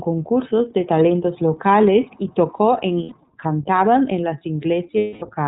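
Throughout, the speech passes through the iLBC codec: nothing above 4 kHz survives, and plainly audible roughness, consistent with 30 ms frames at 13.33 kbps, sounds synthetic rather than muffled or smeared. At 3.03 to 3.13 s (90 ms) and 4.98 to 5.23 s (240 ms), lost iLBC frames become a held, buzzy vowel-like tone that fades through the longer gap, not silence or a stutter, and the voice returns almost immediately.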